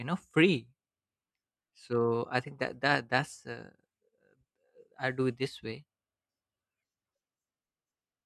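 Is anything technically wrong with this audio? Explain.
No, nothing technically wrong can be heard here.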